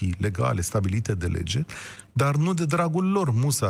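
Speech clip with scattered short gaps between 1.95 and 2.78 s, starting just after "legale stabilite de lege". Around five tiny holes fall across that stretch, the longest on the order of 10 ms, together about 50 ms, or roughly 7 percent of the span. They register as brief ticks and smears rather than dropouts. The pattern points to isolated lost or late packets, each patched by the receiver extending the preceding sound, so nothing goes fully silent.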